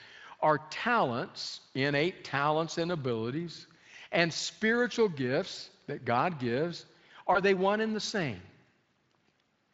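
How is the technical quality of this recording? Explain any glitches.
There's one real glitch, a short dropout-and-repair near the end, riding on light Speex coding. At 7.33 to 7.40 s you get VoIP packet loss concealed by the speech codec. About 20 ms of audio, which points to a single lost frame, went missing, and the decoder filled the gap by extending its last pitch and filter state at falling gain. That makes a brief stretched, fading sound, and because each frame leans on the one before, the speech stays weak or distorted until about 7.40 s, after the gap itself ends.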